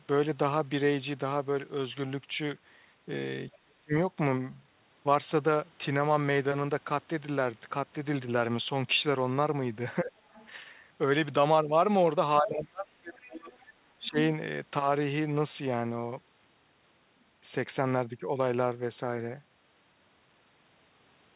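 From 3.58 to 3.93 s the speech drops by roughly 35 dB. This is speech suppressed in double talk: the echo canceller was likely unable to separate the talker from the loudspeaker echo while both sides spoke, and turned both down. A shorter dip of about 20 dB follows at 10.04 to 10.14 s. At 10.34 to 10.48 s a faint second voice, some 30 dB below the speech, comes through. This is the other side's voice leaking through, likely from loudspeaker echo the canceller did not fully remove. From 12.41 to 13.52 s the speech is held down by up to about 30 dB for roughly a second. Within and just after that stretch, the other side leaks through again at 13.14 to 13.28 s and 13.52 to 13.58 s, about 25 and 35 dB down. A final suppression of about 15 dB falls at 13.98 to 14.18 s. Throughout, the audio carries nothing above 4 kHz, consistent with a G.711 call path at 64 kbps.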